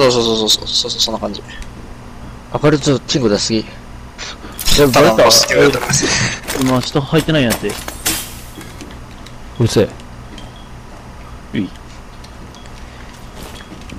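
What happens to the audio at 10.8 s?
Linear timecode at 23.976 frames per second is bleeding into the audio across the whole clip, adding a faint steady chirping warble around 1 and 2 kHz, roughly 35 dB down.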